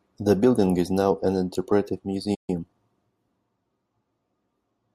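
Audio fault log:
2.34–2.50 s, playback stall: The player most likely ran short of buffered data or had its output thread held up, so nothing reached the output for about 136 ms. Right after "is now an interpretive" the speech cuts to silence in mid-flow rather than at a natural pause. When output resumes, it picks up where it stopped. The listener hears a brief hole in the delivery.
2.50–2.76 s, time-compressed catch-up: To recover the delay built up during the stall, the player trims its backlog by dropping small slices of audio and cross-fading across the joins. For about a quarter of a second, right after the gap, the speech runs at roughly 1.5 times normal speed while keeping its original pitch. It sounds rushed rather than chipmunk-like before normal pacing returns.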